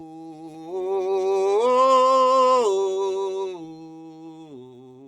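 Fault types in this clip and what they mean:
Noise suppressor applied to music or sounds: a suppressor built for speech stayed active on this music, treating sustained tones and ambience as noise. The level swings by around 10 dB, with held sounds and tails sinking while attacks pass, so the music pumps and thins.
Sound cut by the noise suppressor: the suppressor judged these passages to be noise and pulled them down harder, by about 8 dB at the deepest, from the start to 0.71 s and from 3.53 s to the end. Sustained sound sinks and decays cut short.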